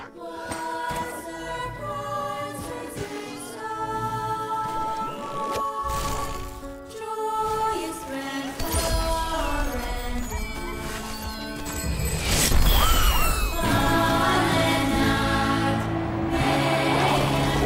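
Nothing stood out on listening through this recording.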